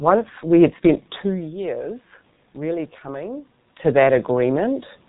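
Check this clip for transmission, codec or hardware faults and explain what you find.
One codec fault runs through the whole clip: G.723.1 compression, heavily damaging the speech. For the entire recording, everything above 4 kHz is missing, so the speech is muffled, and the coder's slowly updated voice model, working in 30 ms frames at what sounds like roughly 6 kbit/s, leaves a hoarse, rough texture and smeared consonants. That roughness sets it apart from a simple low-pass filter, which dulls the sound without the hoarseness. The level changes near 1 s and 3.5 s come from the talker moving relative to the microphone, and the background noise belongs to the room itself.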